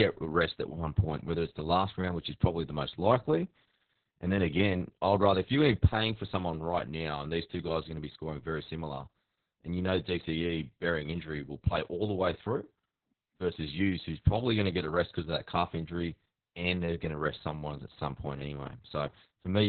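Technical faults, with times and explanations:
Throughout, Opus voice compression: the speech sounds as if it was squeezed through the SILK speech coder at a very low bitrate, consistent with about 6 kbps in narrowband mode, with nothing above 4.4 kHz and coarsely coded excitation. The result is heavily muffled, hoarse, slightly robotic speech.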